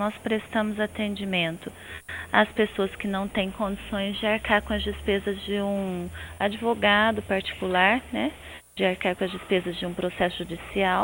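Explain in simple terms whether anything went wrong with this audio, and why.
Nothing went wrong with this audio; no technical faults can be heard anywhere in it.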